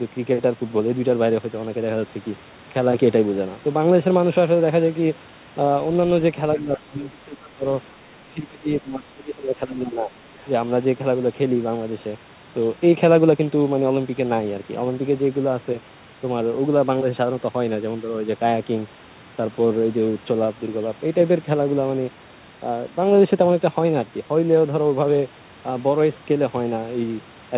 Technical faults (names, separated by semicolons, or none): speech suppressed in double talk; other side's voice leaking through